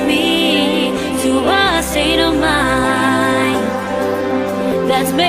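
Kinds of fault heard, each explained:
No technical fault can be heard anywhere in this audio. There are no dropouts, level jumps or added noise to point to at any moment.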